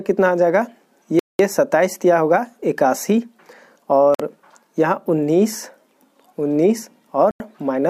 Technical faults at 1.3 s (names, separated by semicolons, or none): Bluetooth stall